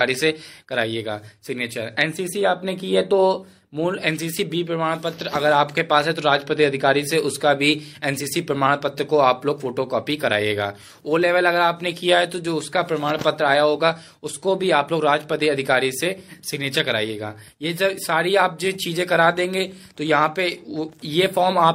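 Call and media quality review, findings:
No faults found in the signal path during review; nothing heard points to a dropout, level problem or processing error needing a ticket.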